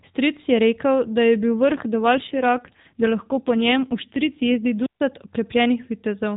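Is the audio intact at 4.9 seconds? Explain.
No. From 4.77 to 5.00 s a brief surge of hiss gives way to a hole of near silence lasting about 140 ms, then the speech returns. This is a wireless microphone squelch dropout: the FM radio signal faded and the receiver's squelch muted the output.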